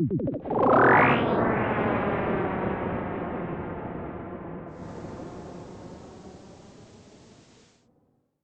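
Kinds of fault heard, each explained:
Digital radio blending to analogue: the hybrid receiver lost its digital stream and cross-faded over roughly a quarter of a second to the station's FM broadcast, returning to digital later. From 4.66 s to 7.89 s a faint hiss, around 35 dB below the signal, rises underneath, and the level shifts by about 2 dB. Both changes reverse when the digital signal comes back.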